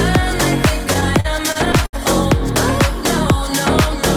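Repeated stalls (stutter) run from 0.93 to 1.95 s: nine short gaps where late-arriving packets drained the jitter buffer, and the receiver stretched the preceding sound for about 196 ms in total, at most 70 ms at once. Nothing is lost, but the audio drags and stutters.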